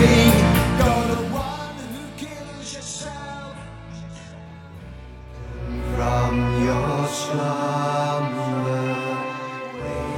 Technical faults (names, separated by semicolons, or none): adaptive stream at a lower bitrate